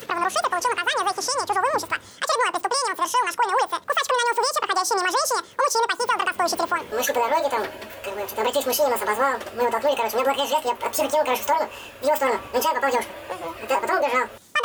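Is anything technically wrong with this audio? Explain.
Yes. Throughout the clip the audio is read two samples at a time, so it plays at double speed. The reader treats each pair of samples as a single frame, as if the data were stereo or twice as wide. Everything therefore runs at 2x and sits 12 semitones, an octave, higher. On a spectrogram, every component sits at twice its frequency. The waveform's events are compressed to half their length.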